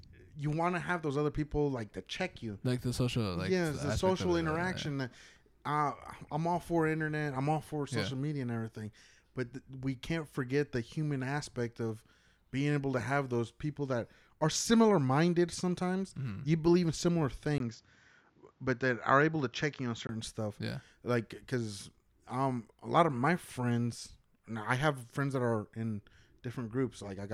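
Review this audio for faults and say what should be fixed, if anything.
From 17.58 s to 20.09 s the speech turns dull and boxy, then clears again. Nothing above 7.6 kHz survives in that stretch. A brief gap of about 20 ms marks the change at 17.58 s. The level stays roughly the same. A new noise floor appears, about 40 dB below the speech. The likely cause is an input switched to a poorer device, a narrower-band microphone or headset call profile, before switching back. Lock the recording input so the system cannot change devices mid-session.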